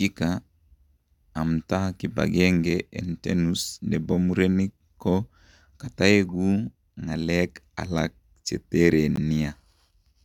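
A speech clip with one block of digital silence at 9.16 s, just after "kitaekuu ng'akeek alaak chetereen". About 16 ms of audio cuts out with hard edges, heard as a short hole. The output buffer was likely not filled in time.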